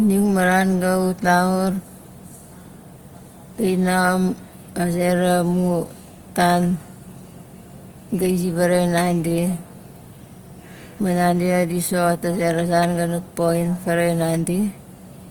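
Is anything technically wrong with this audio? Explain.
Yes. Throughout the speech there is plainly audible Opus compression, likely from encoding at a low bitrate around 24 kbps in its music mode. Bands that run short of bits get filled with folded or noise content, so tones turn rough and grainy. Unlike MP3, there is little swirl, and the bandwidth still reaches about 20.2 kHz rather than muffling.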